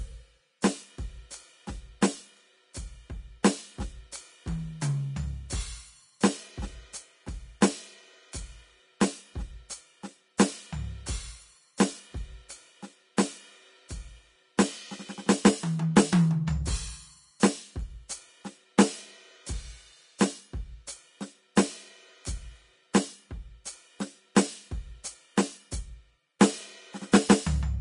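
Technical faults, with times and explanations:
Throughout: Vorbis compression. The music sounds hissy and grainy, tones are roughened, and nothing is present above 10.6 kHz. The likely cause is low-bitrate Vorbis coding, consistent with about 31 kbps, which lowers the cut-off and quantises the remaining treble into noise.
2.01 s, 7.61 s, 24.35 s, 26.39 s: pre-echo. A brief hiss of 10 to 14 ms leads each sharp attack, which sounds softened. The codec spreads noise across a whole block, so noise sized for the loud onset leaks into the quiet instant before it.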